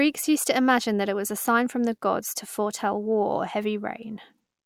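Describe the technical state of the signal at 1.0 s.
No fault can be heard at 1.0 s, where the speech signal comes through intact.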